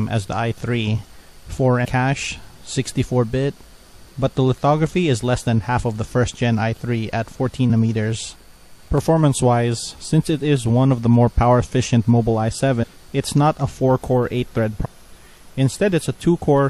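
Four brief blips come from damaged data in a compressed stream. They fall at 1.84 to 1.86 s, at 7.69 s, at 12.82 to 12.84 s and at 14.84 to 14.86 s. Each lasts about 20 ms or less. At these points part of the coded data is wrong. The decoder misreads those frames and loses sync. It then hunts for the next valid frame header. What comes out is a short chirp, squawk, click or hole that breaks into the sound.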